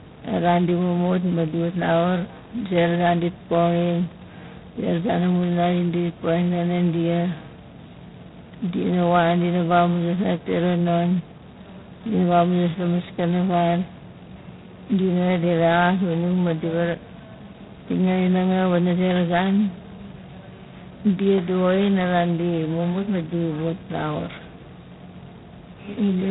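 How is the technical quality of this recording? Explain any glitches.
The technical quality is poor. The whole recording carries heavy G.726 ADPCM damage, and nothing in the speech rises above about 3.9 kHz.

From start to finish, each sample is coded as a small difference from a predicted value. The coarse rasp heard here fits the 16 kbit/s rate, which leaves only two bits for that difference. The resulting harsh, gritty hiss rises and falls with the speech level. On a spectrogram, the energy stops at a hard ceiling near 3.9 kHz, and a grainy noise floor fills the band beneath it.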